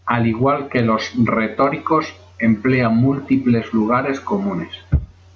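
Throughout the clip there is gain pumping, likely from input gain set far too high with a fast limiter or compressor clamping down on every loud syllable. The level swings by around 10 dB. Loud and quiet passages sit unnaturally close together, so the speech sounds squashed, within the call-style band that stops at 8 kHz.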